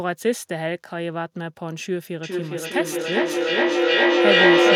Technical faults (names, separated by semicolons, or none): feedback echo between two devices